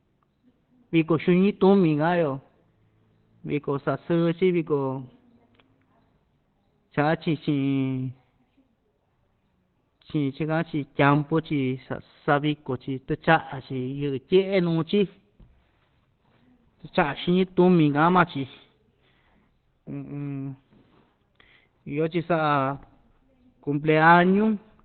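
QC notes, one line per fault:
Throughout, Opus compression. The speech sounds muffled and hoarse, with heavy damage across the whole clip. Nothing is present above 4.2 kHz, so sibilants and consonant detail are dulled. The narrow band points to a very low bitrate, which fits around 12 kbps. At such a rate the encoder is likely working in its speech (SILK) mode. That mode models the voice coarsely and drops the upper band, leaving a flat, rough texture.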